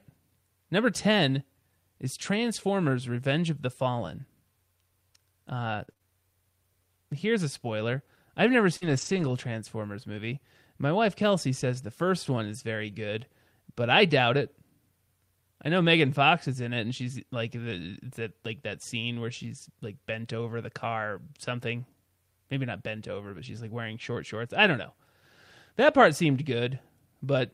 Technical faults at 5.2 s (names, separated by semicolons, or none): none